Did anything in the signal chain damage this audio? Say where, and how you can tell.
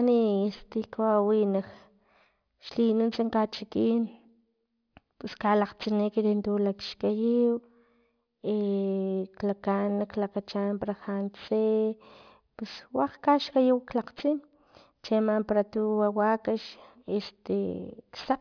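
Yes, there's aliasing right through the speech, and it points to a sample-rate conversion that skipped its anti-alias filter. The sibilants sound gritty and metallic from start to finish, and the spectrum runs hard up to a wall at 5.5 kHz, which fits a drop from 44.1 kHz to about 11 kHz. Anything the voice had above 5.5 kHz got mirrored back down into the band as unrelated tones, sitting roughly 25 dB under the speech.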